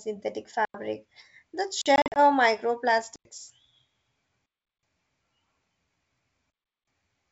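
At 0.65 s the speech cuts to a block of digital silence for about 93 ms. That length fits a 4096-sample output buffer left unfilled. A shorter hole follows at 1.81 s, about 43 ms.

From 1.96 to 2.17 s there is packet loss on an ADPCM call. About 120 ms is missing, scattered over 200 ms, and the longest run is 40 ms. That points to roughly seven lost packets. After each gap the speech returns slightly distorted, because the decoder's predictor and step size have drifted from the sender's.

Digital silence returns at 3.16 s for about 93 ms. It comes back at 4.46 s and 6.50 s for about 372 ms each. These longer holes fit 16384-sample buffers.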